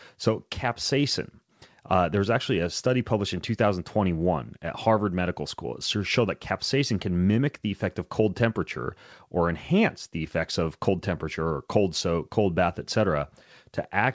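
No technical faults are audible.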